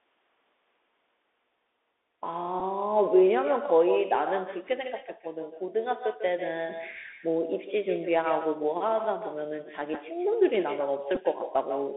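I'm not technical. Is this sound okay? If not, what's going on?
No. Echo with no canceller runs through the whole recording: the other end plays the call out of a loudspeaker, its microphone catches it, and nothing strips it out, so every phrase returns roughly 150 ms later as a fainter, hollow copy.

The Bluetooth CVSD headset codec is also present throughout. This low-quality headset link carries only a narrow slice of sound, cutting everything above about 3.6 kHz. The result is muffled, with scratchy s sounds, some distortion on louder moments, and a grainy hiss underneath.

There are three brief Bluetooth headset packet repeated glitches, at 2.60 s, at 9.94 s, and from 11.15 to 11.20 s. Pieces of audio between headset and phone went missing, and the chip replayed the previous piece. Each one is heard as a tiny tick or buzzy blip.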